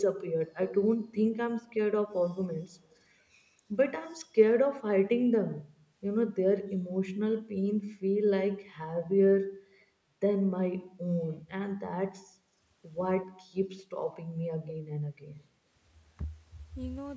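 A speech recording from a call, with far-end echo the echo canceller likely failed to fully remove. It leaves brief echo leak scraps, delayed copies of earlier speech at 0.26–0.30 s (196 ms delay, about 20 dB down), 2.95–3.00 s (200 ms, about 40 dB down), 13.22–13.26 s (213 ms, about 25 dB down) and 14.68–14.72 s (215 ms, about 20 dB down). The canceller also appears to have mistaken simultaneous talk for echo: speech suppressed in double talk at 15.26–15.42 s, where the talker's level dips by up to about 30 dB over roughly 150 ms.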